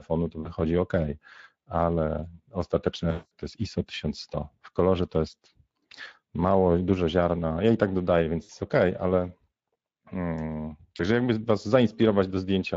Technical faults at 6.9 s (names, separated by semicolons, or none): Speex codec